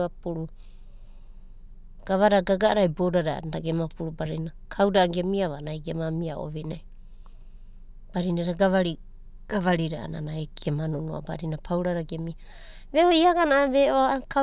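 No technical faults are audible.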